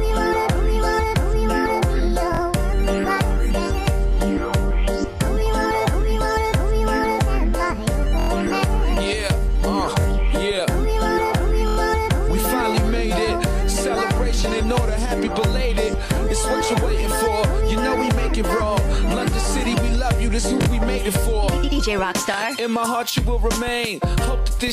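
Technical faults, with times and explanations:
2.35–2.39 s, 8.20–8.29 s, 10.01–10.05 s, 11.68–11.77 s, 20.62–20.67 s and 22.34–22.36 s: repeated buffer. A brief stutter where the same 23 ms slice plays again with a hard join at each repeat. It repeats twice extra at 2.35, 10.01 and 20.62 s, four times at 8.20 and 11.68 s, and once at 22.34 s. New audio arrived late, so the device replayed its last buffer, which fits a 1024-sample buffer. Nothing is skipped; the sound stalls briefly.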